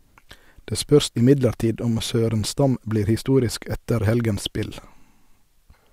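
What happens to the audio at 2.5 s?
Nothing goes wrong at 2.5 s; the audio is intact and continuous through that moment.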